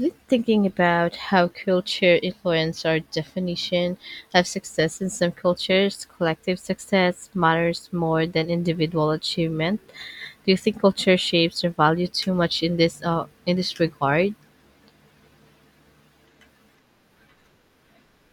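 No technical faults can be heard anywhere in this speech recording. There is nothing to place on the timeline and nothing to explain.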